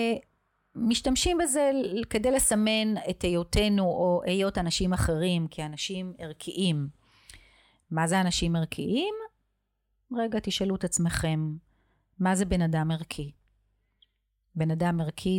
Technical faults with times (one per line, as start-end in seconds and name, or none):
4.03-4.75 drift correction step